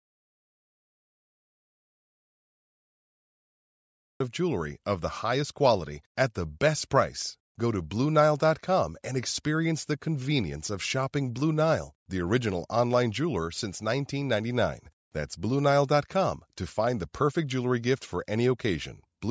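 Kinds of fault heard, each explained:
Audio dropout to silence: The clip opens already in digital silence, with no room tone, and the speech only arrives at about 4.2 s. That pattern points to the input being lost, likely through a disconnected device, a failed link or a mute, while the recorder kept writing silence. Whatever was spoken in those first four seconds is missing. The band-limited call-microphone sound, topping out at 8 kHz, begins only once the signal returns.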